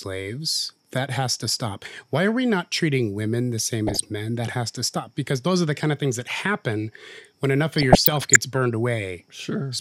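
A speech recording with bursts of burbling noise from 3.87 to 4.01 s and again, longer, from 7.73 to 8.36 s. This is DAB burbling: weak reception let bit errors of a fraction of a percent through, corrupting sub-band levels frame by frame.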